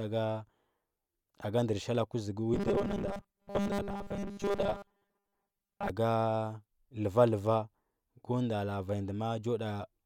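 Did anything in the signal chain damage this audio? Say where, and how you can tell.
Yes: robotic sound from repeated short buffers, 2.54 to 5.90 s. The rigid 200 Hz buzz suggests a starved driver buffer, likely looping 5 ms chunks and skipping most of the audio.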